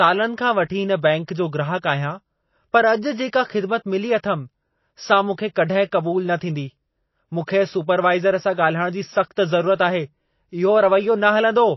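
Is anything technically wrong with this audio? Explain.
Yes, there are two problems worth flagging in this speech clip.

The whole thing sounds like MP3 compression. Nothing comes through above 5.8 kHz, and the codec damage is plainly audible throughout. The likely cause is an encoder starved of bits, which fits a low bitrate around 24 kbps. When the encoder can't afford to code everything, it drops weaker frequency lines. Those lines flicker in and out from frame to frame, and it also chops the treble off at a fixed point. That gives the speech a dull, swirly, processed quality.

There's also a pre-echo at 7.46 s. The codec spreads its quantisation noise across a whole block. Here a sharp attack landed late in a block, so noise scaled for the loud moment spilled into the quiet stretch just before it. You hear roughly 16 ms of hiss ahead of the onset, and the attack itself comes across softened and smeared rather than crisp.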